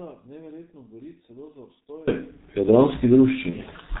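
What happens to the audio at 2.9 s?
At 2.9 s the speech is muffled and hoarse with smeared consonants, G.723.1 codec damage heard throughout. A spectrogram shows nothing above 4 kHz, which fits a 6.3 kbit/s telephony stream.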